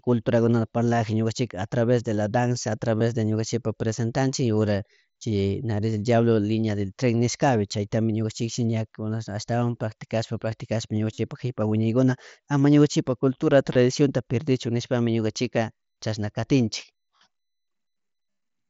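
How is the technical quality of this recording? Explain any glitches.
The recording has five short glitches, all concealed Bluetooth headset packet loss, heard through the light graininess of the mSBC headset codec. At 2.98–3.01, 11.13–11.18, 13.73–13.75, 17.16–17.21 and 18.31–18.37 s, the speech turns briefly buzzy and held, then warbles back. Lost headset packets, about 22 to 60 ms each, were patched by repeating the best-matching recent waveform.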